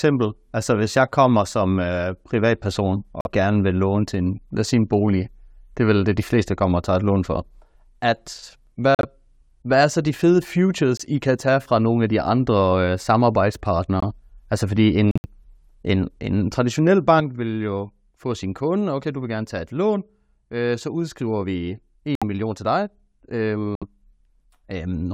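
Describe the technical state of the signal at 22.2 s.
At 22.2 s there's a hole from 22.15 to 22.23 s. That's a corrupt frame muted: the decoder rejected damaged frames and the player dropped in silence, about three frame lengths, with the timing kept intact.

That gap sits inside a one channel drops out stretch that began at 17.2 s, right after "en en traditionel", and runs to the end. The sound dropped abruptly by about 6 dB, likely because one stereo side went dead before the mono sum.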